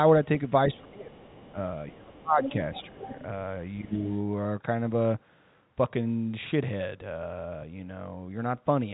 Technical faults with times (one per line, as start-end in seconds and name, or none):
0.70-1.18 speech suppressed in double talk
1.19-1.50 other side's voice leaking through
1.52-1.57 speech suppressed in double talk
1.88-3.25 other side's voice leaking through
1.92-2.41 speech suppressed in double talk
2.86-3.08 speech suppressed in double talk
3.81-3.93 speech suppressed in double talk
4.05-4.17 other side's voice leaking through